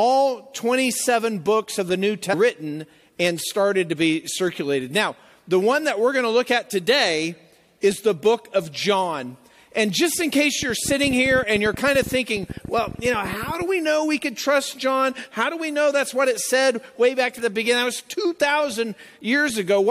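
At 2.32 to 2.34 s the audio jumps forward abruptly, with a brief blip at the join and the continuity of the sound broken. This is likely a stream segment skipped: one chunk of the segmented stream failed to load, so the player discarded it and resumed from the next.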